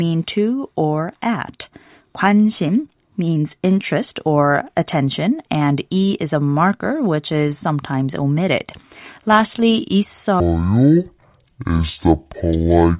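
From 10.4 s to the end, a wrong sample rate sets in. The speech drops an octave (12 semitones) and runs at half speed, which fits 16 kHz audio played at 8 kHz without conversion. Unlike a pitch shift, pitch and tempo fall together.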